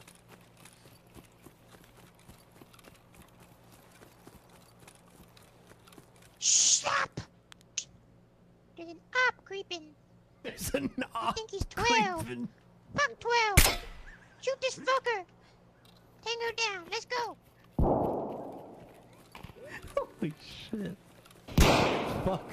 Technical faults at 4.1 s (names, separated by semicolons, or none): none